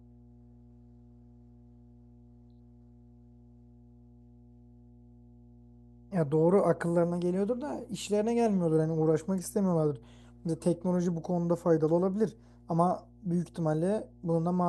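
A steady low drone sits under the speech from start to finish, a constant tone at 60 Hz with a few low harmonics stacked above it, running roughly 25 dB below the speech. This is mains hum: the 60 Hz power line has leaked into the signal path, through a ground loop between connected equipment or through magnetic coupling from a nearby transformer, and was recorded along with the speech.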